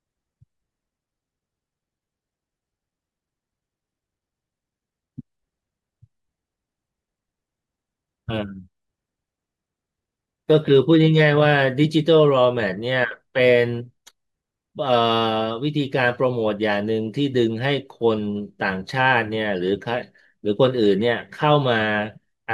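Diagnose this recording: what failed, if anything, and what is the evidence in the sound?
Listening to the speech recording turned up nothing that pointed to a failure at any stage of the chain.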